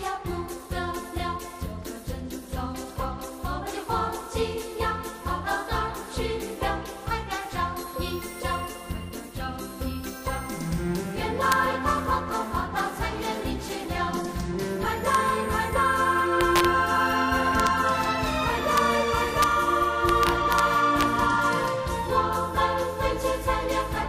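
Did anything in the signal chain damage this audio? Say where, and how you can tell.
Yes: integer overflow in a gain or sample-format conversion stage. Sharp cracks sit on loud peaks at 11.52, 15.15, 16.41–16.65, 17.60–17.67, 18.78, 19.43, 20.09–20.59 and 21.01 s. Peaks running up to about 2 dB past the integer limit wrapped to the opposite sign instead of being limited.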